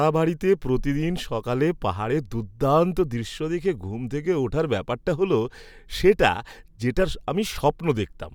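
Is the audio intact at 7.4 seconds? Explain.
Yes, at 7.4 s the speech is intact, with no technical fault at that moment.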